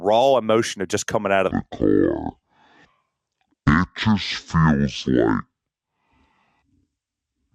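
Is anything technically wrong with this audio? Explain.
Yes. From 1.51 s to the end of the clip, a section at the wrong speed sets in, likely because that stretch was played out against a mismatched clock, running at about 0.53 times its recorded rate. Because speed and pitch move together, the speech from that point drops by roughly ten semitones and stretches out, so the voice turns abruptly deep, sluggish and drawn out compared with the opening second and a half.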